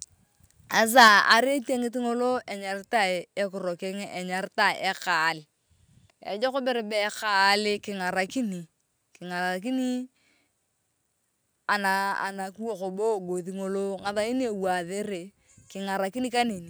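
From 0.98 to 1.33 s the speech turns crackly, likely microphone overload pushing peaks about 7 dB past the converter's limit. The waveform shows flattened peak tops and the spectrogram shows broadband smear.

At 1.08 s voice and background drop about 4 dB together, likely the microphone volume being stepped down, seen as a single step in the waveform envelope.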